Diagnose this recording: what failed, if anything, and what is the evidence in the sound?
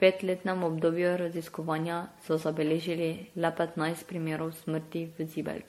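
The codec stage shows generation loss across the whole speech track: swirly, hollow smearing and blurred consonant attacks, with nothing above 16.5 kHz. That points to likely repeated MP3 re-encoding, around ten passes, consistent with 64 kbit/s. A single encode at that rate would sound cleaner, with less accumulated swirl.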